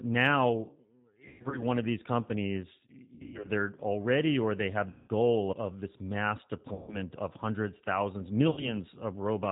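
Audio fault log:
Throughout: G.729 codec. The 8 kbit/s G.729A coder rebuilds the speech from a vocal-tract filter, pitch predictor and a few pulses per frame, so it sounds plainly rough and synthetic. A spectrogram shows nothing above 4 kHz and smeared, pulse-like harmonics.
1.28–1.63 s, 3.16–3.49 s, 4.90–5.11 s, 6.74–6.98 s, 8.51–8.74 s: VoIP packet loss concealed by the speech codec. About 160, 200, 180, 140 and 60 ms were lost, with runs up to 120 ms in the first two. The decoder stretches the last pitch and filter into a fading buzzy tone or coloured noise. The waveform shows a decaying segment, and the spectrogram shows frozen bands. The speech stays weak briefly afterwards.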